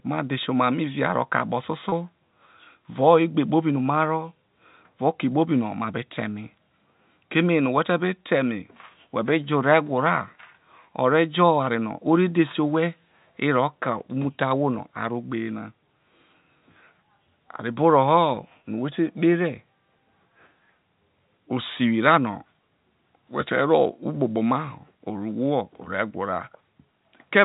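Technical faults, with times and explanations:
1.89–1.92 s, packet loss with pitch repetition: right after "mei via roke akpo", 30 ms goes missing, which fits one lost packet. The last pitch period is looped to fill the gap, giving a brief buzzy hold. The waveform shows identical repeated cycles, and the spectrogram shows frozen harmonic lines.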